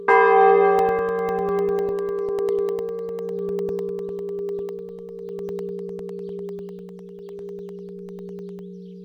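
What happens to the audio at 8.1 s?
A background task stalls the USB bus or audio driver every 0.1 s, causing periodic USB or driver dropouts from 0.79 to 8.59 s, 8.1 s included. Each stall replaces about a millisecond with silence, producing a steady tick ten times a second.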